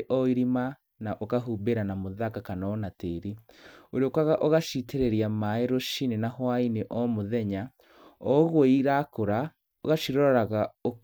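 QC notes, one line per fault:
Nothing to flag on this one; I can't hear any technical problem anywhere in the speech.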